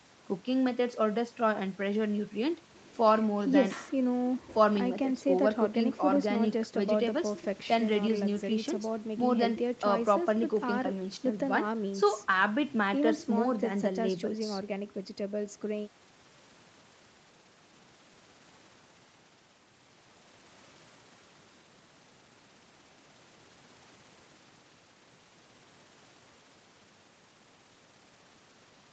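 Nothing technically wrong can be heard in this speech recording. Nothing reaches above 8 kHz, which fits audio carried over a call path with the Opus codec.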